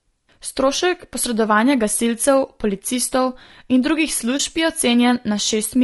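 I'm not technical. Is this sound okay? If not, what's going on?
No. All the way through, the speech sounds rough and grainy, with a dulled or artificial-sounding top end. That's low-delay AAC compression, likely the video-call kind, squeezed hard enough that the fine detail in the voice gets smeared and noise creeps in.

There's also a tiny gap from 4.37 to 4.40 s, right after "gasilcev policistov in drugih". That's AAC frame loss with muting: a chunk of audio went missing, probably a single lost frame, and the decoder filled it with silence, fading out and back in.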